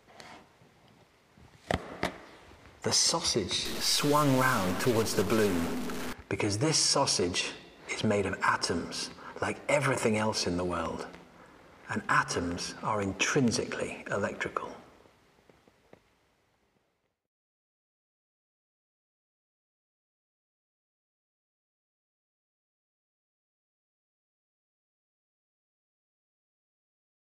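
A stuck bit from 3.65 to 6.13 s brings harsh, buzzy distortion to the audio, and quieter stretches fill with hiss-like noise, with errors of about -30 dBFS. The likely cause is one converter or data line holding a bit fixed, so values flip by that bit's weight.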